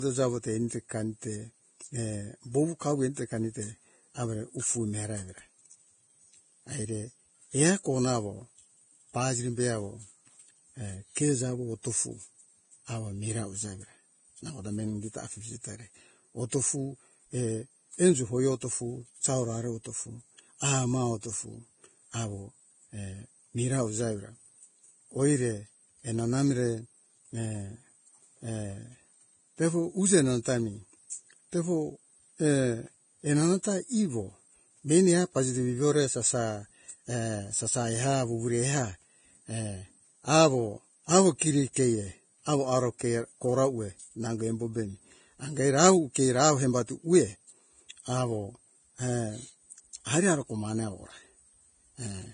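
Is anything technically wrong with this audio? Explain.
Yes. Throughout the speech there is heavy damage, likely from Vorbis compression at a low setting, which fits a bitrate around 23 kbps. Nothing remains above 9.7 kHz. The coarsely quantised treble turns fine detail into hiss, so consonants sound grainy and onsets blurred.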